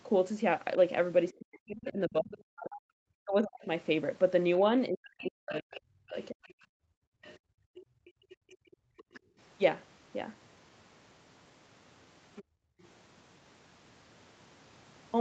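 From 1.38 to 3.69 s the talker's speech is suppressed in double talk: across roughly a second and a half of that span the voice sinks by as much as about 40 dB, breaking into dips and partial dropouts. This is likely an echo canceller that could not tell its own talker from loudspeaker echo while both sides spoke, and so attenuated everything. The same pattern returns from 4.89 to 6.44 s, with about a second of speech pulled down by up to roughly 40 dB.

The other side's voice leaks through at 4.58 to 5.55 s, overlapping that second suppression, at about 20 dB below the talker. It leaks again briefly at 6.43 to 6.64 s, much fainter at around 35 dB down, and then for a longer stretch from 7.22 to 9.2 s at about 25 dB down. A last scrap comes through at 12.36 to 12.86 s, at around 20 dB down. Each is likely far-end audio from the loudspeaker that the canceller failed to remove from the microphone signal.

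Between 6.72 and 9.38 s the background is gated by the echo canceller. The room sound collapses by up to about 35 dB for roughly two seconds in total while the loudspeaker plays, then returns. A shorter gate at 12.44 to 12.81 s drops the background by about 29 dB. Throughout, the audio has no content above 8 kHz, as expected from the call's Opus path.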